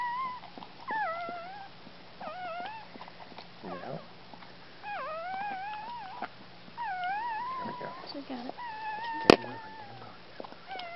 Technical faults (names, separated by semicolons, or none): none